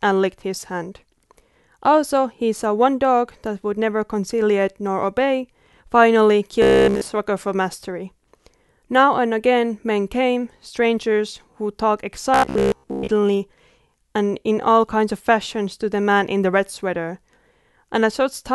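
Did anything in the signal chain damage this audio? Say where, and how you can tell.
Yes. Robotic sound from repeated short buffers appears at 6.62 to 7.01 s and 12.34 to 13.08 s. A rigid 66.7 Hz buzz runs through the speech, with repeats filling the whole first stretch and about 70% of the second. That rate fits a 15 ms chunk being replayed. The likely cause is a driver buffer starving.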